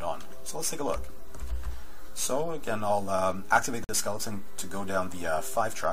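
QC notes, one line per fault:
3.84–3.89 s, gap between stream segments: a hard-edged silence of about 47 ms where two segments' timestamps fail to meet and the player pads the hole. No audio is lost, only delayed. The waveform shows a flat dropout, and the spectrogram shows a blank vertical strip.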